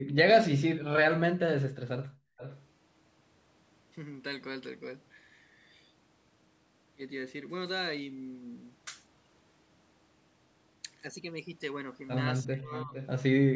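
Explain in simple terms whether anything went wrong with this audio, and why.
The call's echo canceller, which tries to stop the loudspeaker from being heard by the microphone, caused trouble three ways. First, background gated by the echo canceller: it briefly turned the microphone right down, so the room sound drops out from 0.0 to 0.15 s and from 2.2 to 2.37 s.

Second, speech suppressed in double talk: when both sides talk at once, the canceller can't tell the talker from the loudspeaker's echo, and likely turned everything down. The speech sharply dips from 1.19 to 1.94 s and more mildly from 12.45 to 12.93 s.

Third, echo leak: the canceller likely failed to remove all of the loudspeaker sound, so some was sent back. A quiet, delayed copy of the speech, arriving about 456 ms late, can be heard from 2.37 to 2.66 s and from 12.72 to 13.08 s.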